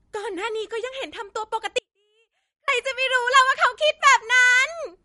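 From the start the speech carries MP3 compression, likely at a low bitrate somewhere near 47 kbps. Nothing comes through above 11.2 kHz, so the top end sounds dull, and the sparse coding leaves a watery, swirly edge on sibilants that's easy to hear.

At 1.79 s there's an audio dropout to a faint residue lasting until 2.68 s, about 0.89 s. The speech cuts off abruptly and only a faint trace remains, roughly 40 dB down, so the signal was likely lost while the path after the break stayed live.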